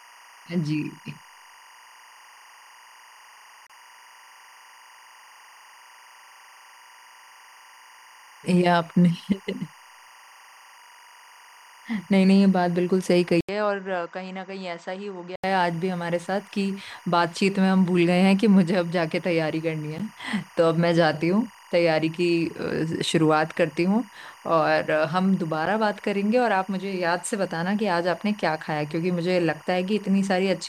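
Timecode bleed runs through the whole speech clip: a steady chirping warble behind the voice, flipping between tones near 1 kHz and 2 kHz at around 25 dB below the speech. Its rhythm fits 24-frame linear timecode leaking from a neighbouring line. Unlike a plain whine or hum, it keeps switching between two pitches.

From 3.67 to 3.70 s a gap at a join of encoded pieces cuts a 30 ms hole into continuous sound. Separately encoded segments were spliced with their start delay and end padding left in. The codec smears the edges, and the sound resumes exactly where it stopped, so nothing is lost as in a dropout.

From 13.41 to 15.44 s the input was likely switched to a poorer device. After 80 ms of silence, the sound turns dull and boxy with nothing above 8.1 kHz. The level falls by about 10 dB, and a new noise floor sits around 40 dB below. Tone, level and noise all change together, which separates this from a simple filter or gain change.

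Two more join gaps follow, briefer: 13 ms at 19.98 s and 11 ms at 25.66 s. Each is a tiny break after which the sound continues seamlessly.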